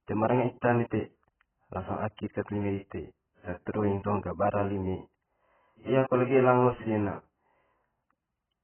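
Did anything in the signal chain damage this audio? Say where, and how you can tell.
Yes. The damage sits at the codec stage and runs through the whole speech clip: nothing survives above about 3.1 kHz, so the sound is dull and boxed-in, with heavy coding damage throughout. On a spectrogram the energy stops at a hard, flat ceiling near 3.1 kHz. The likely cause is AAC compression (AAC-LC) at a very low bitrate, around 9 kbps, where the encoder pulls its cut-off down and spends its few bits only on the lower band.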